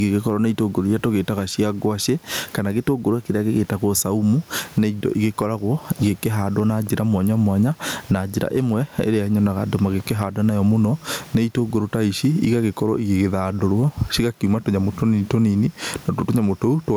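Gain pumping runs throughout the speech: the room noise, about 39 dB below the voice, swells by roughly 15 dB in pauses and ducks under loud syllables, likely from excessive gain and fast limiting. Unlike a noise gate, the background never cuts to silence.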